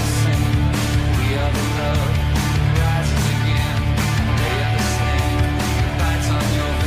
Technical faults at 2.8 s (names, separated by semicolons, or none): damaged data in a compressed stream